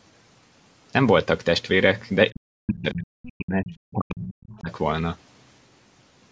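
Speech suppressed in double talk runs from 2.31 to 4.7 s of this speech recording. The talker's level repeatedly sinks, at its deepest by something like 40 dB, adding up to roughly two seconds of lost or gutted speech. This is likely the call's echo canceller hearing the far side talk at the same moment and being unable to tell its own talker from the loudspeaker echo, so it turned the whole microphone signal down. The other side's voice leaking through appears as a brief scrap from 3.68 to 3.74 s, inside that suppressed stretch. It sits around 20 dB below the talker. The likely cause is the far end playing over the talker's loudspeaker, with the canceller not removing all of it from the microphone pickup. The call's microphone processing leaves the band topping out at 8 kHz.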